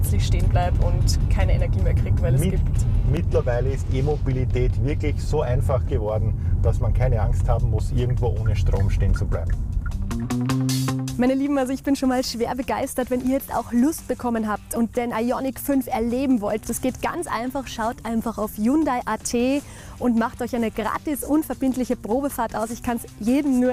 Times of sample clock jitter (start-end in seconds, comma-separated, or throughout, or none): 6.06-11.57